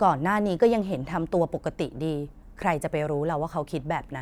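No technical faults are audible anywhere in the speech.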